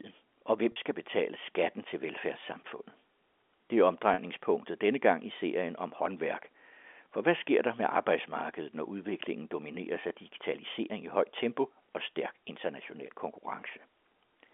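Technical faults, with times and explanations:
0.72 to 0.76 s and 4.14 to 4.18 s, packet loss with pitch repetition. Each time, about 40 ms of audio went missing, which fits two 20 ms packets. The receiver filled each gap by repeating the last pitch period it had. So the sound briefly holds on one buzzy tone instead of moving on. The gaps are shorter than the roughly 50 ms fade, so the sound never drops to silence. It picks up again over the G.711 telephone line, whose band is 250 Hz to 3.5 kHz.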